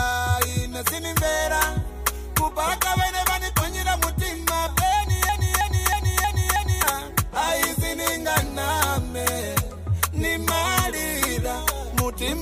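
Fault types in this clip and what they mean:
Broken-record loop: from 5.29 to 6.83 s, a fragment of about 0.32 s plays again and again, five times in a row, with each pass identical to the last and joined end to end. The likely cause is a stall in the player, encoder or stream, which kept resending the last piece of audio it still held instead of moving on. Whatever should have played during those repeats never arrives and is missing from the clip.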